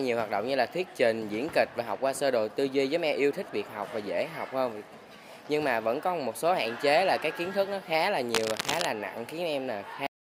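From 8.34 to 8.86 s a dense, uneven rustle scrapes across the sound, sitting only a little below it in level. This is cable scratch noise, most likely a worn cable, connector or control being moved so its contact resistance jumped about rapidly, injecting ragged bursts of noise.

At 10.07 s the audio stops dead mid-sound and falls straight to digital silence with no decay at all. This cut-off end means the final buffers were never written or played, so the sound was simply truncated rather than allowed to finish.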